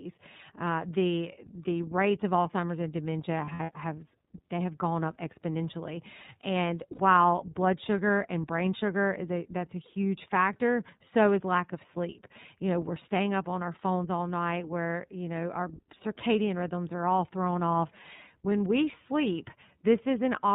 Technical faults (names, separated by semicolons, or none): iLBC codec; lost iLBC frames